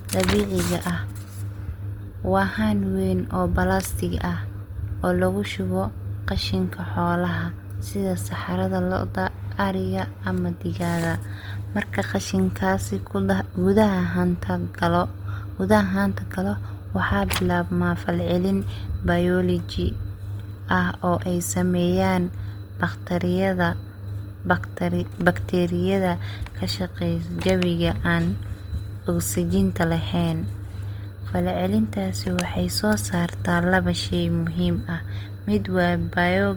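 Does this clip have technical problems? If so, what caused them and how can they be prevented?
Yes. Opus compression runs throughout the clip: the speech sounds rough and grainy with a noisy texture, because the encoder ran short of bits and filled bands with folded or noise content. The likely cause is music-mode Opus at a rate that fits about 24 kbps, with nothing above 20.2 kHz. Encoding at a higher bitrate, or keeping a lossless master for distribution, would prevent it.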